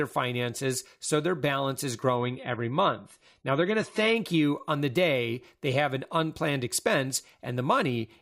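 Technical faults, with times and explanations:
2.16 to 4.16 s, adaptive stream at a lower bitrate: the treble above 11.4 kHz abruptly vanishes and the speech turns swirly, then full quality returns with no gap, which fits a brief drop to a low AAC bitrate. A spectrogram shows a hard ceiling over those two seconds.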